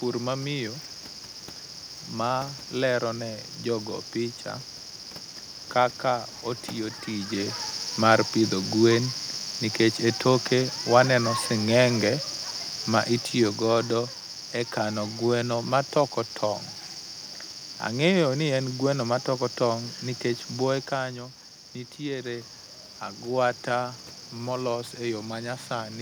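A nearby DECT cordless phone or its base station is sending a radio burst every 10 ms, and the audio circuitry is rectifying it. The result is a DECT cordless phone buzz: a thin, steady 100 Hz tone rich in harmonics, sitting roughly 25 dB under the speech for the whole recording.

From 12.92 to 14.17 s, the automatic gain control judged the input too loud, or its background noise too strong, and gradually lowered its gain by 6 dB. With this automatic gain falling, the speech and the room background sink together, settling at the lower level by "e kano gweno matoko".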